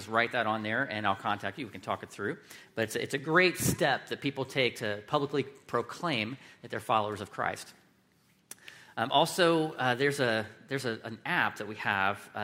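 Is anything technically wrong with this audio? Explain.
No, there's nothing technically wrong with this audio.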